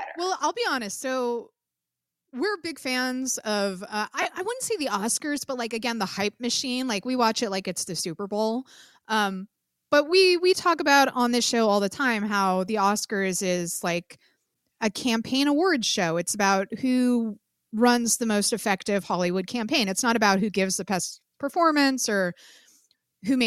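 At 4.22 to 4.25 s, between "big fans of uh" and "I wouldn't say", the speech briefly turns into a noisy smear. These are lost LE Audio frames. About 30 ms went missing, which fits four 7.5 ms LC3 frames, and the decoder filled the gap by repeating the last spectrum with randomised signs.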